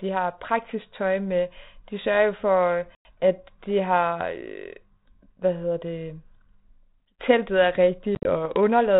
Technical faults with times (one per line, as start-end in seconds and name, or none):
2.95-3.15 packet loss on an ADPCM call
8.15-8.30 packet loss on an ADPCM call